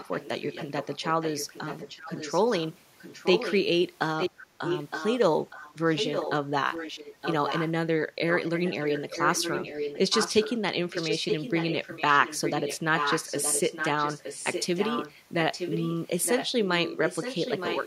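From 0 to 3.56 s, a delayed copy of the speech trails the original by 0.92 s at roughly 10 dB below it. This is echo leak, likely a far-end echo canceller letting loudspeaker pickup return down the line. The echo returns louder, roughly 5 dB below the speech, from 4.19 to 7.71 s and again from 8.33 s to the end.

Between 4.31 and 4.58 s, the background gated by the echo canceller dips by about 6 dB for roughly a third of a second. The canceller clamped the microphone while its loudspeaker played, so the room tone sags briefly and then recovers.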